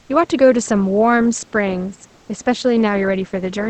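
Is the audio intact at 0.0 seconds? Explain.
No. From 0.00 to 0.09 s, about 90 ms, the real room background is replaced by comfort noise: a steady, featureless hiss about 4 dB quieter than the room sound that follows. The likely cause is the Opus encoder's discontinuous transmission, which stops sending during pauses and has the receiver fill in shaped synthetic noise. Unlike a dropout or noise gate, the background never falls to silence. It loses its texture and level briefly.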